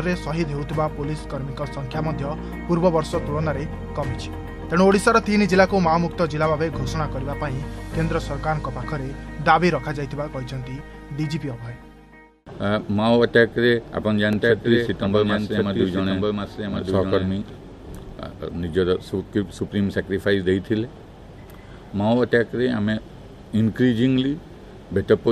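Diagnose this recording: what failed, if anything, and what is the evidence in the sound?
A doubled audio track appears from 14.33 s to 17.57 s. A second, full-band copy of the sound runs about a second behind the first, roughly 5 dB quieter, and starts and stops abruptly at those times. The likely cause is the signal being captured again through a slower path, or an edit that left two copies out of step. Unlike acoustic echo or reverb, the repeat has no decay tail, no room colouring and no high-frequency loss.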